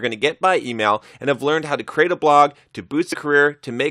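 At 3.12 s, running to 3.15 s, there is a brief burst of damaged data in a compressed stream. For about 22 ms the speech gives way to a short glitch. The encoded bytes covering that stretch were corrupted, so the decoder could not interpret those frames correctly and produced garbage output until it located a valid frame header and regained sync, after which normal decoding of the speech resumes.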